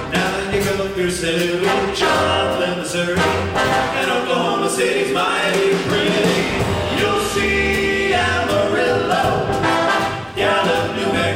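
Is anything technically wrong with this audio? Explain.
No, nothing is technically wrong with this audio.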